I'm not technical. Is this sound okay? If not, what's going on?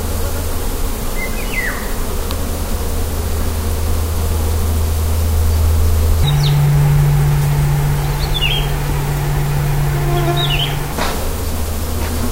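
No. From 6.24 to 10.93 seconds the sound suddenly turns hurried and squeaky, running about 1.81 times too fast and pitched nearly an octave higher. This is a section at the wrong speed, likely played back on the wrong clock setting.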